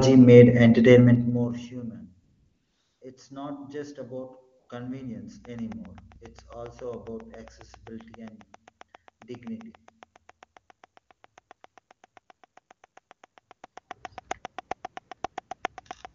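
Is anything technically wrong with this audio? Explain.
Yes, two faults are audible.

AMR comfort noise appears from 2.23 to 3.01 s and again from 4.59 to 4.69 s. The phone treated those stretches as silence and sent no speech frames, so the receiver synthesised a smooth, steady hiss in place of the real background. Unlike a plain dropout, the gap is filled with noise rather than going dead, and the texture switches abruptly at each edge.

A train of clicks runs from 5.45 s to 16.06 s: about 70 near-identical pops at a regular 7.5 per second, peaking roughly 10 dB above the sound and continuing through pauses. The likely cause is interference from nearby equipment or a faulty connection or power supply. Their steady spacing and uniform shape distinguish them from random crackle or codec glitches.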